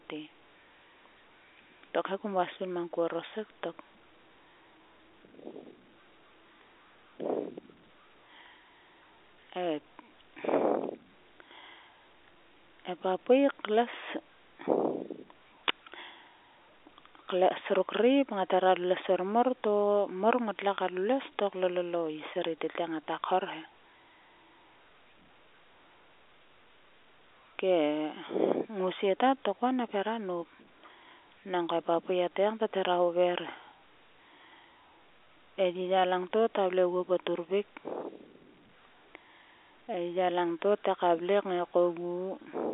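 No technical faults are audible.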